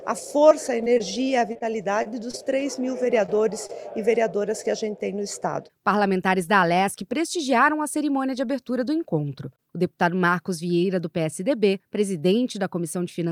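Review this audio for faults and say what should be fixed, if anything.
From 0.49 to 2.77 s there's a stretch of repeated packet loss, and it gives the audio a choppy character. Roughly a dozen short holes land one after another, the longest about 26 ms. Each time, the receiver papers over the hole by stretching the last bit of sound forward, and the next hole arrives before things settle. Around 9% of that span ends up as patched-in sound rather than the real signal.

Just after, there are two isolated cases of short concealed packet loss, at 3.26 to 3.30 s and at 3.67 to 3.71 s. Each drops about 20 ms of audio. The decoder fills the hole with a continuation of whatever came before and then blends back into the real audio, so you hear a quick smear or wobble rather than a clean gap.

To prevent this, the network path needs attention: a steadier connection, a slightly deeper jitter buffer, or forward error correction turned on would stop those packets going missing or arriving too late.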